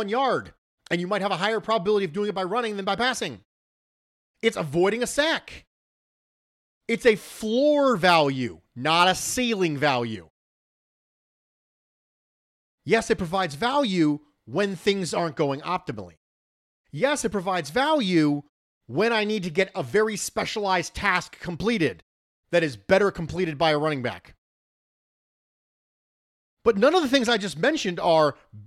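No faults are audible anywhere in this speech clip.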